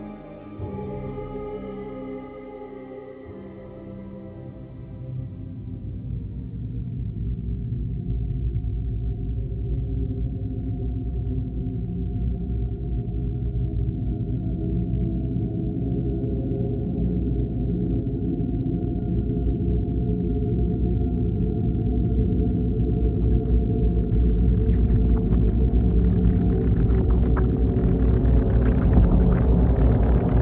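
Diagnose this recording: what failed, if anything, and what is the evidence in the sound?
Nothing stood out on listening; the audio simply stops at 4 kHz, which fits its passage through a narrowband call path such as G.711 A-law at 64 kbps.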